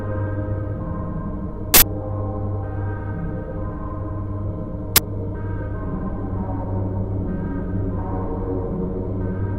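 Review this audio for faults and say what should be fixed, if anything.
Uninitialised buffer bursts at 1.74–1.82 s (80 ms) and 4.96–4.98 s (20 ms): blocks played before being written, so leftover memory came out as loud digital noise. Zero-fill each buffer on allocation and only queue it once it holds valid samples.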